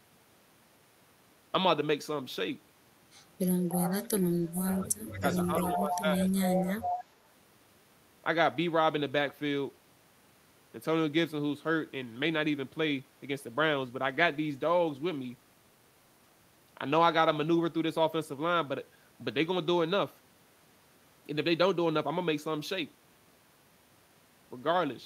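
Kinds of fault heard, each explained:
Echo leak: a delayed copy of the sound returns about 311 ms late in four scraps between 3.42 and 7.04 s, likely because an echo canceller let its loudspeaker pickup through. It starts about 30 dB below the speech, then rises to about 15 and then 5 dB below.
Speech suppressed in double talk: from 3.99 to 5.26 s and again from 5.46 to 6.21 s the speech dips, by about 35 dB at worst in the first stretch and about 10 dB in the second. That's likely an echo canceller turning down its own talker while its loudspeaker was playing.
Call bitrate drop: from 13.77 to 19.47 s the coding gets coarser, so the speech sounds rough, watery or muffled. That points to the encoder dropping from around 64 kbps to around 27 kbps. It sits at the bottom for roughly 3.9 s, then clears before the clip ends.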